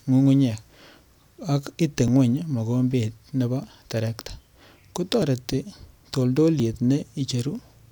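It's a speech clip with small jumps at 0.81, 2.08, 3.64, 5.22 and 6.6 s, each a point where the sound skips ahead without any gap. That's likely a dropped buffer (overrun), losing about 10 ms each time, closer to 20 ms at 3.64 s.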